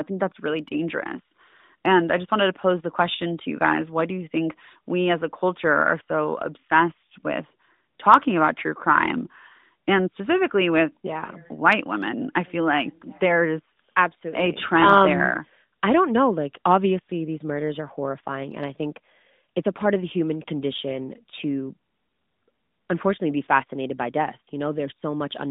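No technical faults can be heard in the speech. It comes over the AMR narrowband mobile codec at 12.2 kbps, with the band limited to about 150 Hz to 3.7 kHz and only light coding roughness.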